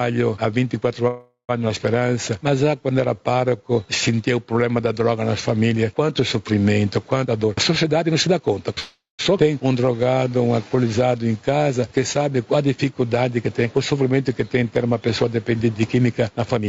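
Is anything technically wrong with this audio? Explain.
Yes. Five kinds of fault are audible, and the first runs through the whole clip.

Gain pumping runs throughout. The gain is pulled down on each loud sound, a swing of roughly 10 dB. The likely cause is input gain set far too high, with a fast limiter clamping each peak. Loud and quiet passages end up squashed close together. On the waveform the envelope looks flattened against a ceiling, and the noise floor bulges up in the pauses.

Call audio freezes occur twice, from 1.07 to 1.51 s and from 8.79 to 9.21 s. Each inserts roughly 0.4 s (413 ms, then 396 ms) that was never in the original. The last sound carries on as a fading buzz and then falls to near silence, for about 110 ms in the first freeze and 170 ms in the second. Packets that arrive late and leave the jitter buffer empty are the likely cause. When audio resumes it picks up where it stopped, and nothing is lost. 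A spectrogram shows a smeared, decaying continuation of the preceding spectrum, then a dark band.

Skip ahead follows each freeze, at 1.69 s and at 9.37 s. Playback jumps forward with almost no gap. About 0.2 s of audio is missing at the first jump and about 0.3 s at the second, as the buffer sheds the delay the freeze built up. The two sides of each jump are butted together. On the waveform this shows as an abrupt discontinuity, and on a spectrogram the spectral pattern changes suddenly at a vertical seam.

Jitter buffer slow-down runs from 2.00 to 4.17 s at 90% speed, adding 232 ms. It runs again from 9.72 to 12.19 s at 88%, adding 294 ms. The receiver repeats single pitch periods over and over to build a reserve. The audio drags while the pitch stays the same, with stretched sounds. A spectrogram shows harmonics at unchanged frequencies, with events spread out in time.

Jitter buffer speed-up runs from 7.24 to 8.73 s at 122%, removing roughly 0.3 s. 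It runs again from 13.36 to the end at 105%, removing about 0.15 s. Short pitch-period chunks are cut out to reduce an excess of buffered delay. The first stretch sounds noticeably hurried at the same pitch, and the second only slightly so. On a spectrogram the harmonics stay level while events crowd closer together.

The call path itself cuts everything above 8 kHz, which shows as a flat ceiling across the spectrogram.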